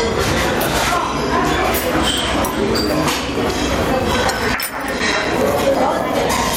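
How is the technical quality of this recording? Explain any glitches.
The recording has two problems: level pumping all the way through, and a run of regular clicks in the second half.

Gain pumping runs the whole length. The level swings by something like 10 dB, so everything feels squashed together. The likely cause is input gain set far too high, with a fast limiter or compressor clamping down on every peak.

Periodic USB or driver dropouts start at about 4.00 s and continue to 6.5 s, one every 0.125 s. Each one punches a gap of a few milliseconds of silence into the sound, so you hear an even train of ticks at eight per second. That pattern points to something blocking the USB bus or audio driver on a fixed schedule.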